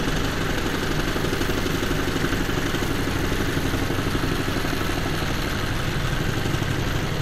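No technical faults are audible anywhere in this recording.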